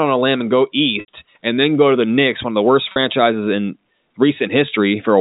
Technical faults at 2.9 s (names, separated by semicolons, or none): packet loss with pitch repetition